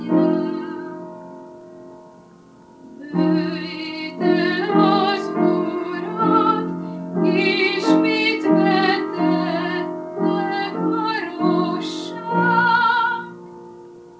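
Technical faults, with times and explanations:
No technical faults are audible anywhere in the audio.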